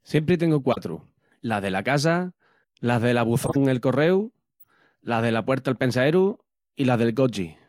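Corrupt frames decoded: damaged bits in compressed speech frames were played as if valid, so misread gains and codes misplace energy. The result is a loud glitch across a couple of frames at 0.72 to 0.78 s, a louder glitch at 3.44 to 3.56 s, and a faint glitch at 4.60 to 4.67 s.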